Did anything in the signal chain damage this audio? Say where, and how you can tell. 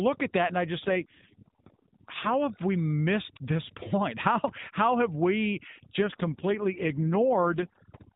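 Yes. In the analogue wiring, mains hum sits under the whole clip as a steady 50 Hz tone with low harmonics, about 25 dB below the speech. That points to a ground loop or a nearby transformer feeding the power line into the signal before conversion.

In call processing, overdone noise removal runs throughout. A suppressor set far too aggressively is cutting individual frequency bands whenever they drop near its noise estimate, so the gaps between phrases fall to near silence dotted with twinkling specks. Quiet speech components fall below the same threshold and get cut too.

On the network side, there are two AMR rate drops, from 0.80 to 2.35 s, starting after "at that and I" and ending before "have we", and from 6.00 to 7.77 s, after "how have we". The link forced the AMR-NB codec down from 12.2 to 4.75 kbps, giving bits to error protection. The bandwidth stays at the same narrow 4 kHz and nothing drops out, but the voice turns buzzier and more synthetic until the rate recovers. 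Outside these spans the codec runs at 12.2 kbps with only light damage.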